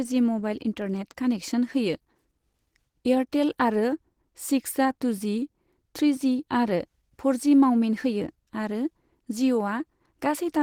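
A speech recording with plainly audible Opus compression throughout. The sound is hoarse and somewhat muffled, with grainy, noisy texture in the upper bands even though content still reaches 20.2 kHz. The cause is likely Opus in its hybrid speech mode, which fits a bitrate near 16 kbps.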